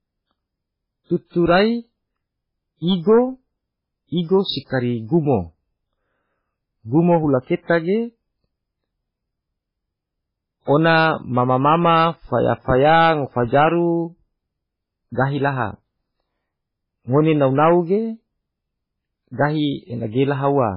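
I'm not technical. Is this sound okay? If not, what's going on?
No. MP3 compression damage runs through the whole recording, from start to finish, and is likely the cause of how it sounds. When an MP3 is squeezed hard, the encoder throws away the treble and drops quieter detail. Here nothing above about 5.2 kHz survives, so the speech sounds dull and muffled. The loss is heavy, so the speech also has a watery, swirly quality, with s sounds turning metallic and the starts of sounds smeared.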